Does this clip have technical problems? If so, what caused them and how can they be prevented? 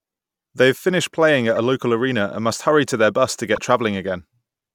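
Yes. Two corrupt frames were decoded in this speech. The first is at 1.56 to 1.58 s, right after "have finished playing at" and before "a local arena and". It spans a couple of frames and is the quieter of the two. The second, louder one is at 3.55 to 3.58 s, after "to their bus to", within a single frame. In each, flipped bits scrambled the frame's gains and codes. The decoder played the frame anyway, pushing energy into the wrong frequencies. Checksum each frame and conceal any frame that fails rather than decoding it.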